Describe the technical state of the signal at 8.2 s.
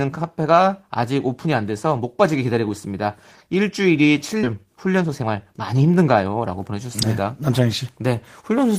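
At 8.2 s the speech signal is intact, with no dropout, distortion, glitch or other fault to be heard.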